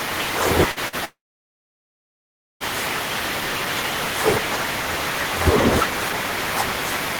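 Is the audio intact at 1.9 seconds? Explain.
No. At 1.9 s the clip is inside a long network dropout running from about 1.05 to 2.63 s, most likely caused by audio packets that never reached the receiver. About 1.56 s of speech is simply gone. Right after 1.05 s the last sound is stretched into a short fading buzz or hiss, and after that there is silence for roughly 1.44 s. The waveform collapses to a flat line, and the spectrogram goes blank until the speech resumes at 2.63 s.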